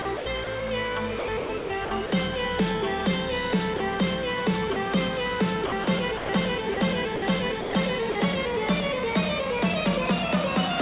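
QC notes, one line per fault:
QC notes, one line per fault:
0.02–0.47 s, 1.19–2.12 s and 5.66–8.15 s, sound chopped by the voice detector: Within each stretch the sound cuts in and out more than once. Short pieces are swapped for synthetic comfort noise, about 150 ms in total in the first stretch and about 450 ms in each of the other two. The likely cause is a sender voice detector that kept toggling transmission on and off. Repeated switching within one span sets this apart from a single dropout. The audio is band-limited with nothing above 4 kHz, which fits a narrowband call codec.
3.77–3.80 s and 4.73–4.76 s, sound dropped by the voice detector: Each is a single 30 ms gap where the sound gives way to comfort noise and then returns. The likely cause is the sender's detector briefly treating quiet material as background, stopping transmission and leaving the receiver to fill in comfort noise. 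Unlike the chopped stretches, each is one clean break with no back-and-forth flicker. The lost sound is simply absent rather than partly kept.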